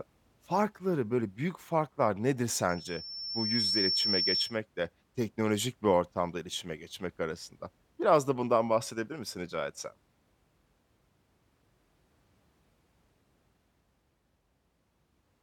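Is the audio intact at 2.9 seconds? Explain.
No, loudspeaker feedback squeal runs from 2.69 to 4.57 s, after "böyle büyük farklar nedir". The microphone re-amplifies its own loudspeaker until a 5.4 kHz tone swells over about a second into a squeal roughly as loud as the speech, ending before "teknolojik bir ortamda iletişime".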